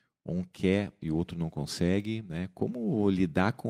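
No technical faults are audible.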